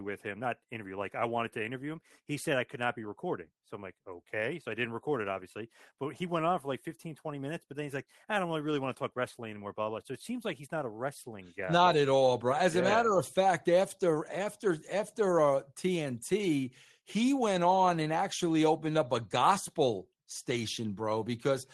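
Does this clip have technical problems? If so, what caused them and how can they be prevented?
No, the speech arrives over a WebRTC call path that is working as intended, with its Opus coding limiting the audio to a band up to 12 kHz, and no technical problems can be heard.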